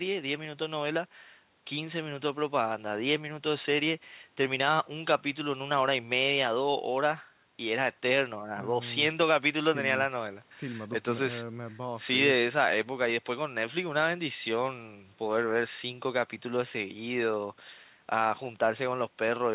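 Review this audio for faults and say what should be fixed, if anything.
Nothing here needs fixing. The speech comes through the call path with no content above 4 kHz, the narrowband sound that fits G.711 mu-law coding at 64 kbps.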